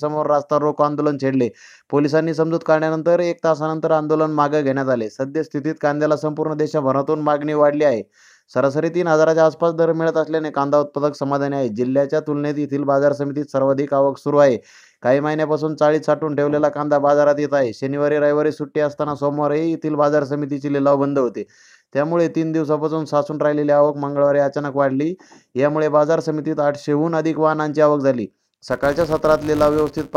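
The audio is clean until 28.71 s, when a filter restarted on every block sets in and runs to the end at 30.16 s. Each block starts from a zeroed filter state, leaving a small transient that forms a 200 Hz buzz tracking the signal level, consistent with 5 ms blocks.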